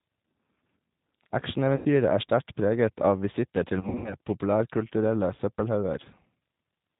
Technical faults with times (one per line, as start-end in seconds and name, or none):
0.00-7.00 G.729 codec
1.76-1.87 VoIP packet loss concealed by the speech codec
3.80-4.15 VoIP packet loss concealed by the speech codec